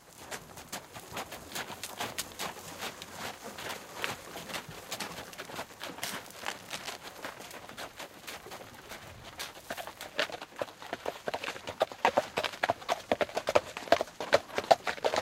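From 6.35 to 6.97 s, a burst of cable scratch noise sits over the sound for about 0.6 s as a dense, uneven rustling and crackling, roughly 10 dB below the main signal. The likely cause is a worn cable, connector or control being moved so that its contact resistance jumped erratically. On a waveform it shows as jagged, irregular spikes riding on the signal. A spectrogram shows a smear of broadband speckle across that span.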